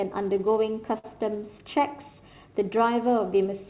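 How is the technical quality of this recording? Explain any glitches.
The recording has timing faults: a slow clock at the sending end, the steady corrections that follow from it, and one brief stall. The sound arrives through a narrowband call path with nothing above 4 kHz, which fits a G.711 mu-law codec.

Clock drift between sender and receiver runs through the whole clip. The sending clock is roughly five percent slow, so the receiver's jitter buffer keeps draining. It has to stretch the audio to keep playing, which makes the timing feel slightly unsteady. On a waveform, the syllable spacing looks subtly irregular rather than smoothly paced.

Repeated timing corrections run from 0.19 to 3.57 s. Playback runs at 97% speed, with about a tenth of a second added in total. The receiver repeats tiny pieces at uneven intervals, all in the lengthening direction. On a spectrogram, small duplicated segments of harmonic pattern appear. 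They are heard as faint hiccups and a dragging tempo.

A short stall from a late packet occurs from 0.98 to 1.06 s. A packet arrived late and the buffer ran empty, so the receiver held the last sound for 55 ms and then resumed where it left off. Nothing is lost. A spectrogram shows a frozen, smeared band, and the waveform shows a repeated, slightly dipped stretch that sounds briefly buzzy.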